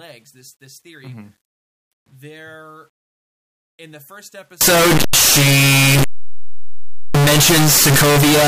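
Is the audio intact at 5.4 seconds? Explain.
No. From 4.61 s to 8.47 s, signed and unsigned are likely mixed up, flipping each sample's top bit. The speech becomes very loud, harsh distortion, with quiet passages as loud as the rest.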